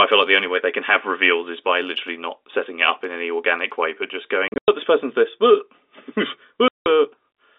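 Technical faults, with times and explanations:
4.48 to 4.68 s and 6.68 to 6.86 s, packet loss filled with silence: the sound drops out in holes, first between "organic way but just" and "this person's this", where 160 ms of gaps (longest 100 ms) are scattered across 200 ms, then as a 180 ms gap. The receiver played silence for lost packets, and the gap lengths fit 20 ms packets.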